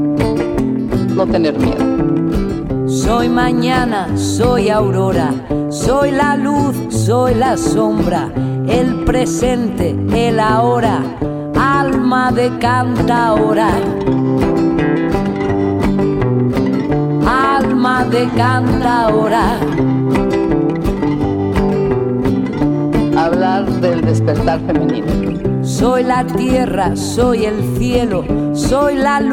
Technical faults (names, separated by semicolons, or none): DAB burbling